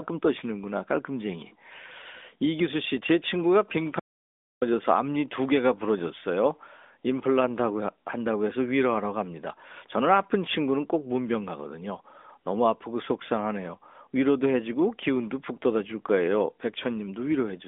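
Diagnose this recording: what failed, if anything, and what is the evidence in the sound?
An audio dropout to silence runs from 4.00 s to 4.62 s, about 0.62 s. The speech stops abruptly and resumes mid-flow. The gap is silent with no room tone. The input link likely failed while the recorder kept writing silence.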